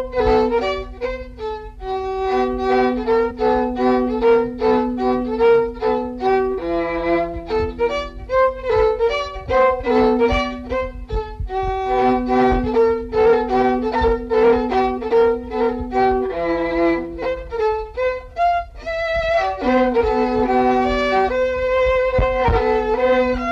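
A brief glitch at 3.30 s marks damaged data in the compressed stream: the decoder misread corrupted frames and lost sync momentarily.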